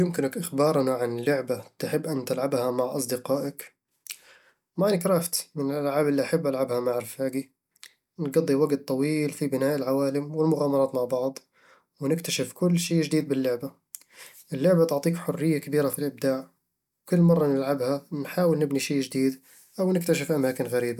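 No technical faults can be heard anywhere in this speech recording. Nothing in the audio needs a timestamp or an explanation.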